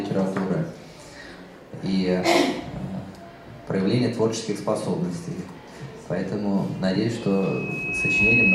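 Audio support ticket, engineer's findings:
Mic picking up its own loudspeaker, loop gain above unity at 2.6 kHz: loudspeaker feedback squeal from 7.21 s to clip end at 8.55 s. Single 2.6 kHz tone swells over about a second, ending roughly 10 dB above the programme sound.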